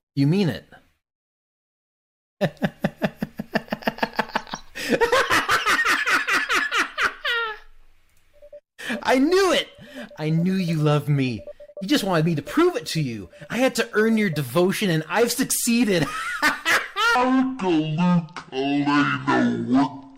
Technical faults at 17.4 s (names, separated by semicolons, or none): section at the wrong speed